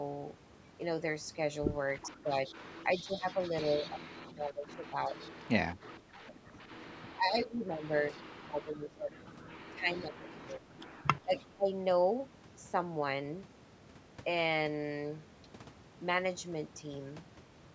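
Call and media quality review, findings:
Echo leak: delayed copy of the speech coming back at 2.02–3.9 s (the longest and loudest, about 15 dB under the talker), then brief scraps at 5.19, 8.15 and 9.96 s, and 10.97–11.47 s at about 20 dB down. Delay runs 373 ms early, drifting to 416 ms by the last one. Likely the far end's loudspeaker-to-mic path getting past its echo canceller. Residue gets returned to us.

Speech suppressed in double talk: far talker dips and gets chewed up from 2.07 to 11.69 s, roughly seven seconds affected in total, deepest drops around 20 dB. Likely the canceller can't tell its own talker from the echo while both sides speak, so it ducks everything. Overlaps the echo bursts. Mic processing band-limits to 8 kHz, nothing odd there.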